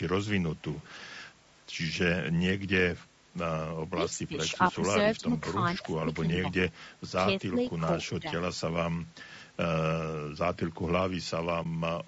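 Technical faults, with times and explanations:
Throughout: low-delay AAC compression, likely AAC-ELD at about 32 kbps; the voice sounds rough and grainy, with noise between harmonics rather than the smoother smearing of longer-frame codecs.
0.71 to 0.90 s: echo leak, likely; a faint delayed copy of the voice arrives about 239 ms later, roughly 30 dB down, a separate repeat rather than room reverberation.
3.94 to 4.35 s, 5.17 to 5.25 s, 5.80 to 6.27 s, 6.65 to 6.76 s, 7.42 to 7.57 s and 8.19 to 8.29 s: speech suppressed in double talk, likely; the voice dips about 10 to 15 dB in short patches while the far side talks, unlike dropouts, which go fully silent.
11.63 to 11.66 s: AAC frame loss with muting; one 20 ms frame vanishes into a brief dip that fades out and back in, unlike a hard digital cut. The band stops near 8 kHz from the call's microphone processing.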